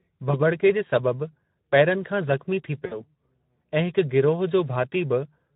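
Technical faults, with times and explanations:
throughout: Speex codec. Hoarse, noisy speech; the low-rate CELP coder, which fits roughly 11 kbps, leaves too few bits to model the excitation cleanly.
0.31–0.41 s and 2.85–3.03 s: VoIP packet loss concealed by the speech codec. Sound smears into a fading buzz or coloured noise as the decoder extrapolates through about 20 ms, then 60 ms, of missing audio.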